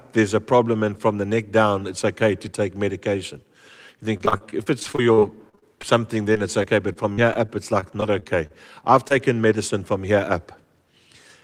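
Choppy, broken-up speech runs from 4.17 to 5.85 s and again from 6.33 to 8.52 s, with pieces of sound missing. This is repeated packet loss (robotic sound): audio kept arriving too late or not at all, and each hole was patched by carrying the last sound forward before the next hole came. The first stretch has 17 gaps, with patching covering about 22% of it. The second has 12 gaps and about 10% patched. No gap is longer than 44 ms.

Between 9.08 and 9.12 s comes a brief smear or wobble. This is short concealed packet loss: about 20 ms of audio never reached the decoder in time. The receiver filled 14 ms of that hole by continuing the preceding sound, either from its pitch or as shaped noise, and then blended back into the real signal. The patch is short, so it passes quickly.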